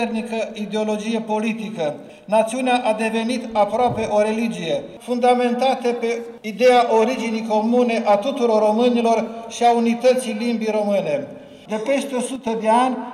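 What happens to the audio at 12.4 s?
At 12.4 s the level dips suddenly. From 12.36 to 12.47 s, about 0.11 s, the audio falls by about 6 dB and then returns just as abruptly. The likely cause is one channel dropping out. One stereo channel goes silent for that moment. Once the two channels are summed to mono, material shared by both loses half its level. Anything carried only by the lost channel vanishes until it comes back.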